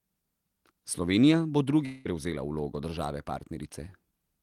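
From 1.85 to 2.07 s the speech breaks off and a buzzy continuation of the last sound carries on for about 0.2 s, fading without ever reaching true silence. It then resumes at "prevzela vlogo države" with that stretch simply gone. This is a long network dropout, likely a run of lost packets that the receiver's concealment papered over. Unlike a brief packet-loss glitch, it lasts a fifth of a second and removes content rather than smearing a few milliseconds.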